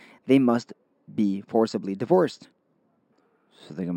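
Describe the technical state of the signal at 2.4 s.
Imaging from linear upsampling at 2.4 s, as throughout: straight-line interpolation from 12 to 48 kHz dulls the highs and leaves a faint 6–12 kHz mirror image, a metallic shimmer on sibilants.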